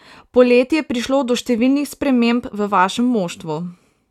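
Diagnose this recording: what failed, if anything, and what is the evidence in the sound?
Nothing failed; no fault is audible in this recording.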